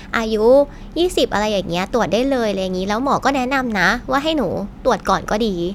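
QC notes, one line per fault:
No technical faults are audible anywhere in the signal.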